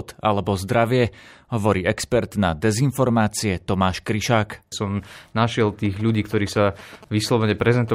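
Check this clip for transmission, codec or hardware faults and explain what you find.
One hardware-related fault is present. From 5.85 to 7.90 s, a galloping dit-dit-dit of short 217 Hz buzzes sits well below the speech: GSM signalling bursts from a nearby phone, rectified by the audio circuitry.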